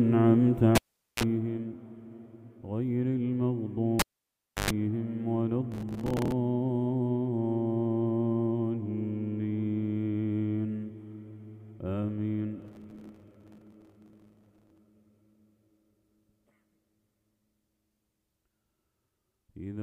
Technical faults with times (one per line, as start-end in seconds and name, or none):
0.75-1.23 cable pulled and plugged in
3.99-4.70 cable pulled and plugged in
5.72-6.32 processor overload crackle
12.62-14.78 processor overload crackle